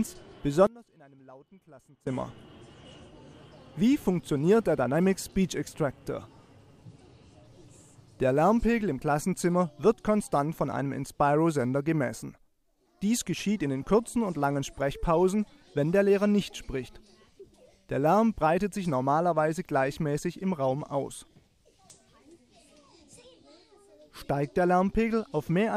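From 0.67 to 2.07 s the sound collapses by about 25 dB, leaving a faint residue, the signature of one channel inverted: likely one stereo side has flipped polarity, so content common to both channels cancels when summed to mono, leaving only their difference.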